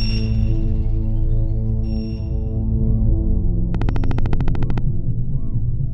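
A train of clicks runs from 3.75 to 4.79 s: about fifteen sharp, similar ticks at a steady 13.6 per second, peaking roughly 10 dB above the sound. On a waveform they are evenly spaced spikes; a spectrogram shows thin broadband vertical lines. Likely cause: interference or a faulty connection or power supply.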